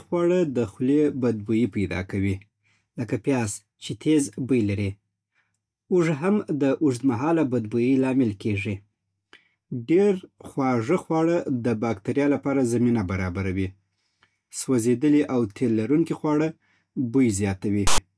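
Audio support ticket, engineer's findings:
Harsh rasping burst, hard-edged, lopsided toward one side of the waveform, 17.87 to 17.98 s, about 110 ms, near end of speech. File tags played as audio: a text tag block in the file is decoded as samples by the reader/parser, and the character bytes become a loud, offset rasp.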